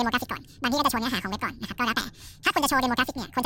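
Speech here runs throughout at twice its proper speed and an octave, 12 semitones, high, because the audio is read two samples at a time, pairs taken as one frame.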